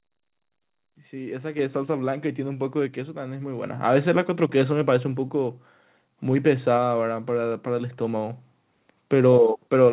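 Speech, in which the call software's automatic gain raised the microphone input volume three times in single steps, at 1.59 s (about 6 dB), 2.61 s (about 3 dB) and 3.63 s (about 4 dB), lifting voice and background together abruptly. The call path's band limit at 4 kHz fits 64 kbps G.711 A-law.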